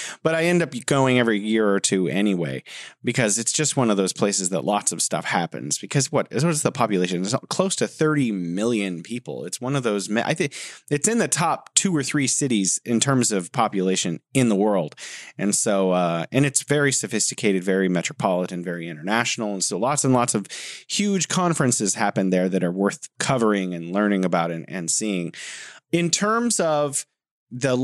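No technical faults can be heard in this speech recording.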